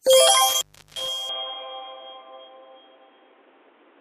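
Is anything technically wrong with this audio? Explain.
Yes. From 0.49 to 1.08 s there is an intermittent contact: a loose connection opens for about 350 ms, cutting the sound to faint hiss between crackles. The waveform shows a near-flat gap bounded by spiky clicks.

From 1.29 s to the end, the input was likely switched to a poorer device. Everything above 3.8 kHz vanishes without any silence at the switch, so the sound turns dull. There is also a small level shift, a new noise floor far below the signal, and a hard spectrogram ceiling at 3.8 kHz.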